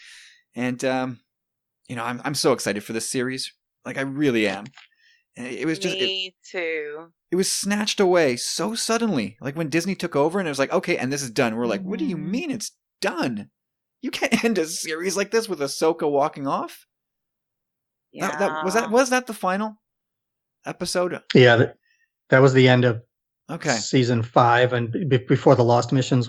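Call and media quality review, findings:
No faults found in the speech recording. Nothing heard requires a ticket entry.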